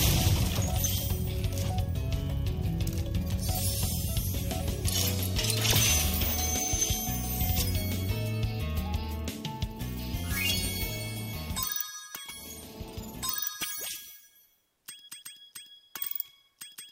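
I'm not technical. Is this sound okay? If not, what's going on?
Yes, this sound is okay, and nothing is going wrong with it.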